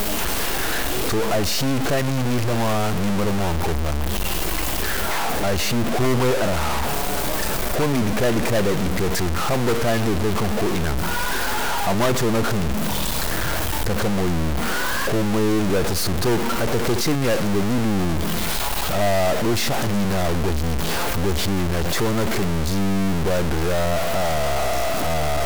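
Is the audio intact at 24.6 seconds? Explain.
No. A stuck bit runs through the whole speech clip, including 24.6 s. One data bit is likely frozen, shifting about half the samples by a step of around -20 dBFS. This gives harsh, buzzy distortion and noisy pauses, seen as square jumps in the waveform and broadband hash on a spectrogram.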